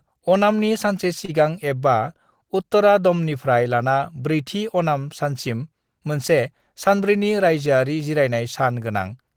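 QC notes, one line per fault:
1.25–1.30 s, short stall from a late packet: a packet arrived late, the jitter buffer ran dry, and the receiver held the last sound for about 31 ms before resuming where it left off. Nothing is lost, but the speech briefly hangs with a slight buzzy smear, and playback then runs about 31 ms further behind.
6.88–7.17 s, jitter buffer speed-up: the buffer had more speech queued than its target, so the receiver repeatedly cut out short pitch-period slices, about 40 ms in all. Speech runs at roughly 111% speed with unchanged pitch, which makes this stretch sound rushed.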